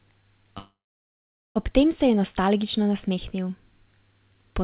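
At 0.58 s the speech stops and its last sound trails off as a brief fading sound, then about 0.8 s of silence, until it resumes at 1.57 s with nothing lost. This is a call audio freeze, likely a jitter buffer starved by delayed packets, adding roughly a second of delay. The call path's band ends at 4 kHz, which fits G.711 A-law at 64 kbps.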